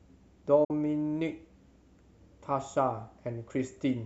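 At 0.64 s the speech drops out in a digital broadcast dropout, with silence until about 0.71 s. The receiver stopped getting usable frames, either because the signal went or because the frames failed their checks, so it muted instead of playing garbage. You hear a quick 8 ms fade into a hole of about 48 ms of missing sound, which fits a couple of lost frames. Whatever was sent during that gap is simply gone when the speech resumes.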